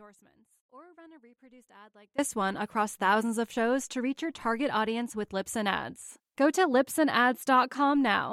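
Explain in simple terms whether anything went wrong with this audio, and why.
From the very start until about 2.19 s, the speech is missing and only a faint sound remains, until it snaps back at "one across thousands of". This is an audio dropout to a faint residue, likely caused by the signal path briefly losing the source while the rest stayed live.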